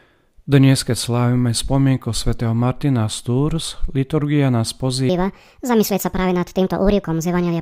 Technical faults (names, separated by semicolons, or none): section at the wrong speed